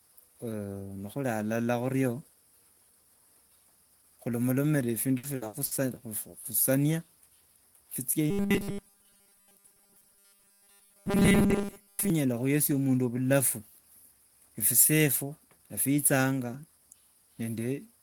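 From 5.17 to 5.74 s, repeated packet loss leaves four gaps, the longest 60 ms, patched by repeating sound; the spectrogram shows smeared, frozen blocks interrupting speech.

From 8.31 to 12.1 s the speech becomes a rigid metallic 200 Hz buzz, likely robotic sound from repeated short 5 ms buffers. The spectrogram shows evenly spaced harmonic stripes and the waveform repeats.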